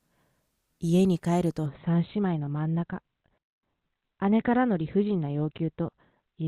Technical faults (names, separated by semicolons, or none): adaptive stream at a lower bitrate